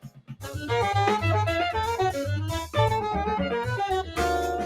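A speech-style noise suppressor has been left running on this non-speech audio the whole way through. It keeps mistaking sustained material and tails for noise, so the level swings by something like ten decibels, pumping down on held sound while sharp onsets slip past. The sound cut by the noise suppressor is clearest at the start: from 0.0 to 0.5 s the opening gets pulled down by as much as about 20 dB and sounds swallowed. A shorter dip follows at 4.03 to 4.18 s, about 9 dB, briefly thinning the sound.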